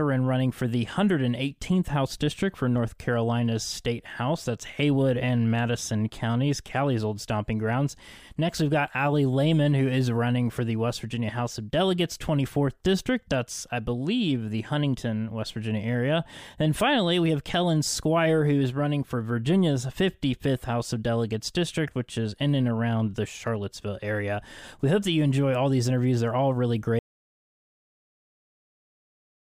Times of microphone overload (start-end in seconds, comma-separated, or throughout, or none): none